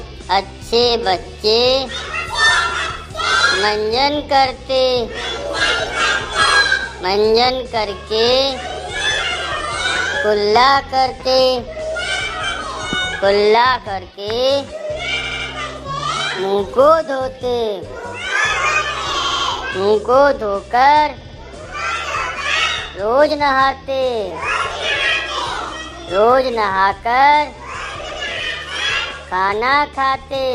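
Repeated frames make the audio stutter at 15.23, 19.23, 21.21 and 28.09 s, replaying an 80 ms block (120 ms at 28.09 s) up to three times. Unlike dropouts, nothing goes missing; time is added instead.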